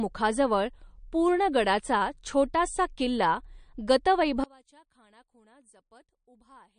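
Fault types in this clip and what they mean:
MP3 compression: Throughout the clip the speech has the watery, swirling texture of low-rate perceptual coding, and the damage is plainly audible. The encoder ran short of bits, so weaker frequency lines were dropped and then returned from frame to frame, and attacks lose their edges. Nothing is present above 9.6 kHz, a fixed treble cutoff. The sound points to MP3 at a low bitrate, which fits about 41 kbps, as the likely cause.
one channel inverted: From 4.44 s to the end of the clip the level drops by about 32 dB, and the speech and background fall away together. What remains is only the residue left after cancellation. The likely cause is that one channel of a stereo source had reversed polarity. When the two channels were summed to mono, everything they shared cancelled, and only the small difference between them survived.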